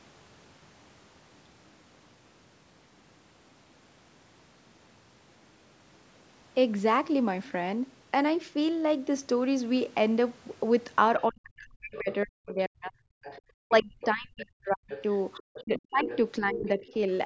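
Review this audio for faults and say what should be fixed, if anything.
Speech suppressed in double talk appears three times: 11.28 to 13.21 s, 13.67 to 14.93 s and 15.39 to 16.96 s. The speech sinks by as much as about 40 dB in the first two stretches and about 35 dB in the third, with roughly a second to a second and a half of each affected. This is likely an echo canceller that, faced with both parties talking, could not tell the local talker from the loudspeaker echo and clamped down on everything. Unlike packet-loss dropouts, the losses track the overlap with the far side rather than falling as short, scattered gaps. To prevent it, use an echo canceller with proper double-talk detection and keep the loudspeaker level moderate so the near voice stays dominant.

The other side's voice leaking through is heard at 13.23 to 13.4 s, 14.9 to 16.17 s and 16.53 to 16.93 s. It sits about 20 dB below the speech in the first scrap and about 15 dB below in the other two. 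This is likely loudspeaker playback reaching the microphone that the canceller failed to remove. It differs from room reverberation because it is a separate voice with its own timing rather than a smeared tail of the talker. To prevent it, use headphones or better acoustic isolation between speaker and microphone, and give the canceller enough adaptation range.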